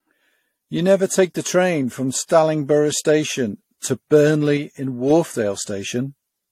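Generation loss runs through the whole speech clip. Nothing is present above 16.5 kHz, and the sound has a swirly, hollow, smeared quality with softened consonant attacks, worse than a single pass at 64 kbit/s AAC would produce. The likely cause is repeated lossy coding, decoded and re-encoded around five times. Each pass quantises again on a shifted frame grid, so coding noise and spectral gaps build up from one generation to the next.

A sudden gain jump occurs at 4.57 s. The speech and its background noise drop together by about 4 dB in a single step, with no fade, and the level stays lower until 5.10 s, when it jumps back. This abrupt, sample-to-sample change likely comes from a gain setting or bit shift applied without a ramp. The hard edges make the level change stand out as a step rather than a natural dip.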